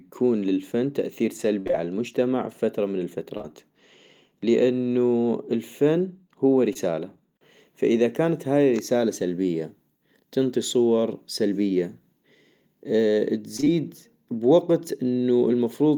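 At 1.59 to 1.75 s, just after "للفن تأثير", the speech turns choppy across three quick dropouts. This is repeated packet loss: about 100 ms of audio went missing in gaps up to 59 ms, each patched by extending the preceding sound. Around 3.37 to 3.45 s, ending on "بفترة من", and again at 6.73 to 6.77 s after "لانو الفن هو", there are brief smears. These are short concealed packet losses, where roughly 20 ms holes were bridged from the last sound before blending back. At 13.57 to 13.68 s, the speech turns choppy again from repeated gaps of up to 19 ms.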